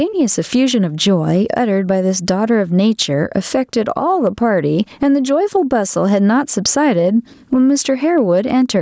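Throughout the speech, the gain swings by around 10 dB, pulled down under loud syllables: gain pumping, likely from excessive input gain driving a fast limiter. The call microphone processing caps content at 8 kHz.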